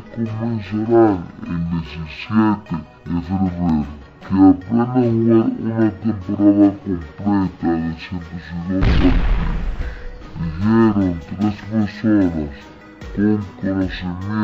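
From start to finish this is stereo read as mono: the left and right samples got pulled in one after another as a single channel, so everything plays at half speed and a full octave low, with a fainter mirrored copy up in the top half of the spectrum.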